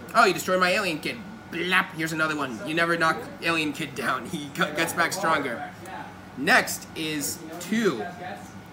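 No technical faults are audible.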